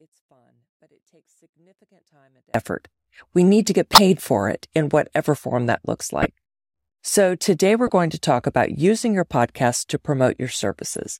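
The signal path likely lost its input before the clip begins and stays broken until 2.54 s. This audio dropout to a faint residue leaves only a faint sound, roughly 40 dB down, then cuts abruptly back to full level.

Compressed frames then arrive with flipped bits, and the decoder plays them anyway, scattering energy into wrong frequencies. Each corrupt frame decoded is heard as a short chirp or noise burst. The first, the loudest, comes at 3.93 to 3.98 s between "need to get" and "for it in whatever". Another loud one follows at 6.22 to 6.25 s, after "whatever form that looks". A softer burst falls at 7.87 to 7.92 s between "today we're" and "to talk about". Fainter blips occur at 9.00 s and 10.92 to 10.97 s.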